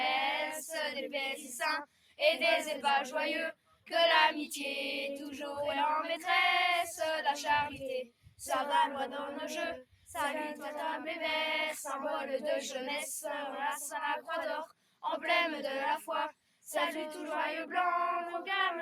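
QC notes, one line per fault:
1.86–2.19 s, 3.53–3.87 s, 8.07–8.40 s, 9.85–10.07 s, 14.70–15.03 s, 16.32–16.64 s: sound cut by the noise suppressor. In each window, lasting roughly a third of a second (the fourth somewhat shorter), the suppressor misjudges the sound as noise and pulls it down by up to about 12 dB, so the audio briefly sinks.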